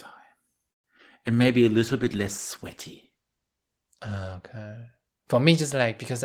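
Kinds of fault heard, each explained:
Call audio freeze: From 0.71 to 0.86 s the speech stalls and goes almost silent for about 0.12 s, then resumes exactly where it stopped. Nothing is lost, but everything after arrives about 125 ms later. The likely cause is delayed packets emptying the jitter buffer.
Short concealed packet loss: At 0.98 and 1.02 s, about 20 ms of speech is missing each time. The decoder briefly extends the preceding sound and blends back, leaving short smears or wobbles. The second gap also removes roughly 20 ms of delay.
Call bitrate drop: From 1.27 to 5.29 s, the encoder drops from 32 to 13 kbps. It stays at the lowest rate for about 1.9 s. The speech sounds coarser and rougher throughout, because fewer bits mean cruder coding until the rate recovers.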